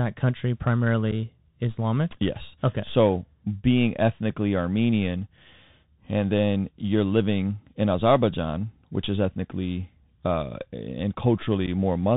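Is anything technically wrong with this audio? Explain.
Yes. The speech runs throughout over a Bluetooth CVSD headset codec. The sound is narrowband, with nothing above 4 kHz. The codec sends one bit per sample, saying only up or down, and adapts its step size. Loud, bright sounds rise faster than the step can follow, so they distort, and s sounds come out scratchy. A granular hiss sits under the speech. The damage is plainly audible and fits a 64 kbps CVSD link.

There are two unconcealed Bluetooth headset packet losses, at 1.11 s and 11.67 s. In each, about 7.5 ms of audio is missing, roughly a single voice packet between headset and phone. Nothing fills the gap, so the speech drops out abruptly and may click at the edges. It then comes back briefly quieter as the CVSD decoder's step size recovers.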